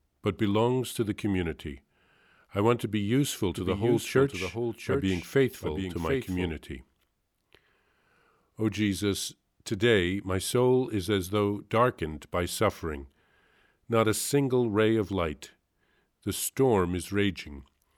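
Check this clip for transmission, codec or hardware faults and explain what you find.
One fault is present in this speech: a doubled audio track from 3.55 to 6.49 s. A second full-band copy trails the original by roughly 0.7 s at about 5 dB quieter, likely captured again by a slower path. It sounds like a dry, roomless echo that starts and stops abruptly. On a waveform or spectrogram, each speech burst reappears as a fainter identical shape shifted about 0.7 s later.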